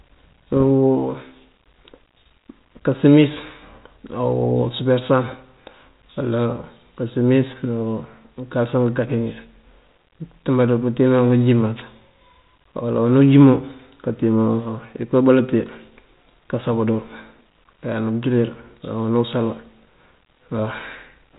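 From 0.52 to 0.63 s, bit errors on an ADPCM link produce a cluster of pops and rough grit. Each flipped bit throws off the decoder's step size and predictor, so the damage rings on briefly, showing as thin vertical streaks and jagged level jumps in the waveform.

At 11.74 to 11.85 s, a wireless microphone noise hit breaks through as a short swish of static. The FM radio signal faded, letting receiver noise swell over the speech, seen as a broadband smear filling the spectrogram up to the 4 kHz G.726 band edge.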